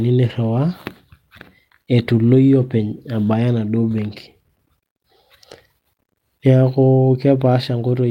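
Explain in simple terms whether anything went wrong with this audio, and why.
Nothing went wrong with this audio, since no fault can be heard anywhere in the recording.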